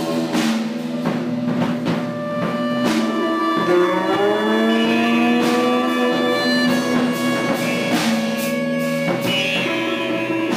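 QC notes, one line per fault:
Throughout: crude rate conversion. The 48 kHz to 44.1 kHz change picks the nearest sample without filtering, so timing errors recur in a fixed pattern and add an inharmonic fizz roughly 25 dB below the sound. On a spectrogram, faint stray lines and haze cut across the harmonics, strongest under loud, bright passages.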